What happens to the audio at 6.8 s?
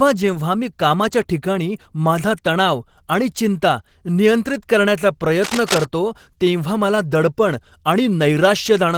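At 6.8 s the speech carries Opus voice compression, which runs through the whole clip rather than starting there. At about 16 kbps in hybrid mode, a linear-prediction coder handles the band below 8 kHz and a coarser transform layer fills the top, giving a hoarse, slightly robotic tone. On a spectrogram, energy reaches about 20.2 kHz, but the upper band looks patchy and smeared in 20 ms blocks. The waveform shows little.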